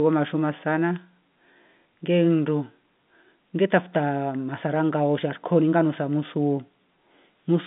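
No faults are audible in the speech; it sits in the narrow band of G.711 A-law telephone coding, about 150 Hz to 3.6 kHz with nothing above 3.8 kHz, which fits a 64 kbps line.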